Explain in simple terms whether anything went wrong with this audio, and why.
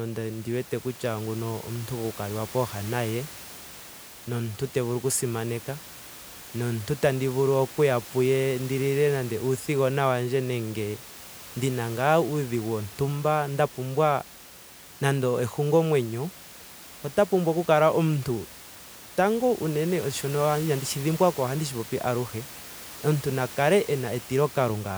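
Nothing went wrong that I could hear in this speech recording; the faint background noise of the room sits well below the voice and is simply part of where it was recorded.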